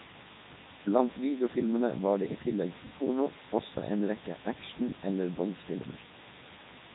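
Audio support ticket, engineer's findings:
Low bit depth with dither: constant, even hiss across the full clip, sitting only around 10 dB under the speech level. No grit or distortion, just steady white noise. Points to quantisation to about 6 bits, with dither turning the rounding error into uniform noise.

Codec 2 vocoder: speech robotic and buzzy throughout; nothing above 3.8 kHz. Waveform not preserved. Decoder rebuilds the voice from sine waves using pitch, voicing, energy and spectral envelope only. Heavy damage, consistent with the 3.2 kbit/s mode.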